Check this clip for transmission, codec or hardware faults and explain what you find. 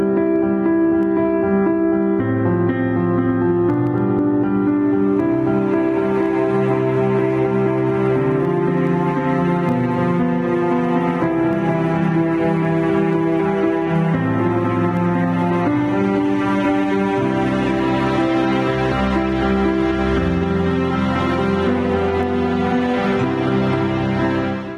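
There is one fault, gain pumping, present throughout. The gain swings by about 5 dB, likely from gain set too high feeding a fast limiter. The waveform looks flattened.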